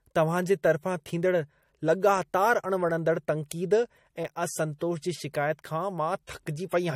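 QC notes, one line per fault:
Throughout: transcoding between lossy codecs. The speech carries two overlapping kinds of compression artefact, heard together, with nothing present above 16.6 kHz. The likely cause is an MP3 encode at roughly 50 kbit/s re-encoded to AAC-LC at a similar low rate. The second codec spends bits reproducing the first one's errors, adds its own, and keeps the lower bandwidth limit.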